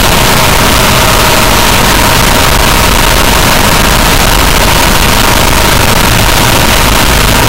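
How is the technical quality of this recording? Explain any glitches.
Pretty rough, I'm afraid: the whole thing is a wall of loud, harsh distortion from start to finish. Throughout, it sounds like signed and unsigned got mixed up, likely on 8-bit samples, so the top bit flips and every zero crossing leaps across the full range. Quiet stretches end up just as loud and buzzy as everything else.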